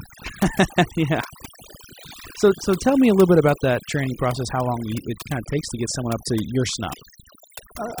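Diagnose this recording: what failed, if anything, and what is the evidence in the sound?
Overdone noise removal, present throughout the speech, points to the call-processing stage, where a noise suppressor was run far too aggressively. The background between phrases drops away and breaks up into twinkling specks. The suppressor pushes individual frequency bands down or out whenever their level sits near its noise estimate, so quiet consonants and soft harmonics are stripped along with the noise.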